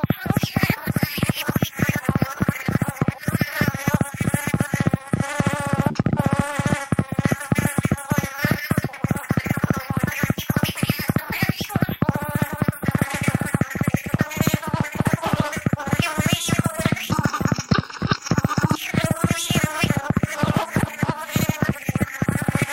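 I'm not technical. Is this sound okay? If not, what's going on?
No. Computer activity noise runs from start to finish: a buzzing, chirping or scratching layer pulsing around 150 times a second, sitting well below the main sounds. It comes from the computer itself. When the processor, graphics card or mouse changes how much power it draws, it disturbs the electrical ground the audio circuit shares. That is why the noise rises and falls with what the computer is doing, not with the sounds being recorded.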